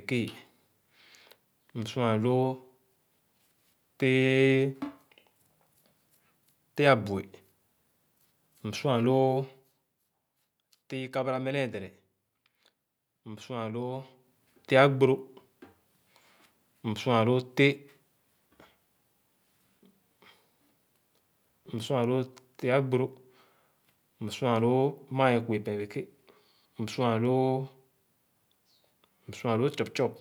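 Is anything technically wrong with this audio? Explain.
Yes. From 13.94 to 14.35 s, a fast ticking, zipping texture rides on the speech while its level shifts by roughly ten decibels. This is zipper noise: the gain moves in discrete 1 dB jumps, around thirty per second, instead of gliding, so each jump puts a small click into the waveform.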